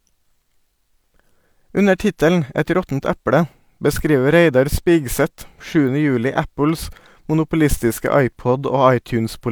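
No technical faults can be heard anywhere in the speech recording, with the signal holding steady and continuous throughout.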